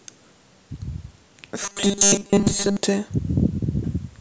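From 1.63 to 2.77 s the speech takes on robotic sound from repeated short buffers, a rigid metallic buzz fixed near 200 Hz that only loosely tracks the syllables. The likely cause is starved input replaying a 5 ms slice for most of that stretch, unlike a hum, which would not follow the speech.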